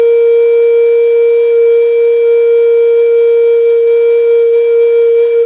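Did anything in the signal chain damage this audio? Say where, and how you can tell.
No, nothing in this music stood out as damage on listening; the band stops at about 4 kHz, as expected from a call path carried over G.711 A-law.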